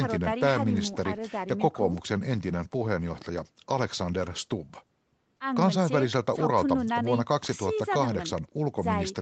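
No technical faults are audible.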